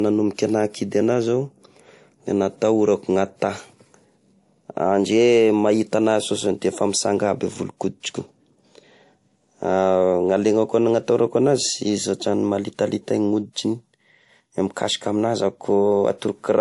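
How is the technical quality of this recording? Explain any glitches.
The quality is held back by compression damage that runs through the whole speech clip. Nothing above 11.1 kHz survives, and there's a layered, smeary artefact texture. That's likely transcoding between lossy codecs, which fits a low-rate MP3 around 48 kbit/s re-encoded to WMA around 96 kbit/s. The higher second rate can't restore what the first encode discarded. WMA spends bits on MP3's swirl and adds its own, so both sets of artefacts stay audible together.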